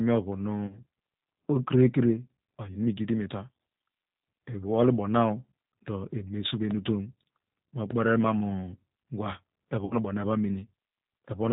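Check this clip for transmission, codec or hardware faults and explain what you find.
Three kinds of fault are audible in this speech: codec damage throughout, two dropouts with concealment, and two loud pops.

The G.729 codec runs for the whole clip, at 8 kbit/s, and its damage is plainly audible. The codec models the voice with a vocal tract filter, a pitch predictor and a few pulses per frame. It discards everything above 4 kHz. The speech sounds dull, rough and slightly synthetic.

VoIP packet loss concealed by the speech codec occurs twice. The first is from 0.67 to 0.84 s. About 30 ms of audio is missing, which fits one lost packet. The second is from 9.85 to 9.95 s. About 60 ms is missing, which points to two packets. Each time, the decoder stretches its last pitch and filter while fading the level. A buzzy, smeared stretch results. The voice stays weak briefly after the gap.

A loud pop occurs at 6.71 to 6.73 s and again at 7.91 to 7.93 s. 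Each is a single sharp click on top of the continuing speech. The first peaks at about 10 dB above the signal and the second at about 15 dB. The likely cause is a sudden voltage step, from a switch, static or a driver glitch.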